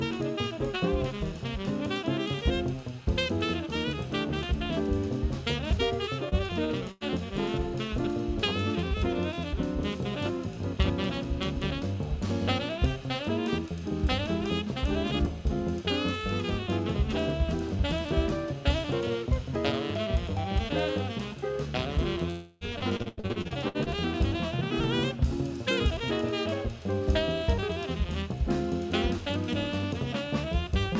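At 6.29 to 6.34 s, a short concealed packet loss replaces about 30 ms of missing audio with a continuation of the preceding sound, heard as a brief smear before the real signal returns. Shortly after, two bursts of packet loss, at 6.64 to 6.73 s and 6.91 to 7.04 s, lose about 60 ms and 90 ms. Each is filled by extending the last sound and fading it, so it becomes a held buzz or hiss, and the audio resumes with that stretch gone. At 22.31 to 22.64 s, a long network dropout of about 300 ms is bridged by a fading continuation rather than silence, likely because nothing arrived from the network for that span. From 22.79 to 23.89 s, repeated packet loss (robotic sound) follows: eleven separate gaps, the longest 87 ms, conceal over a third of the span, giving a choppy texture with pieces missing. Throughout, nothing is heard above 8 kHz, which fits a wideband call codec such as G.722.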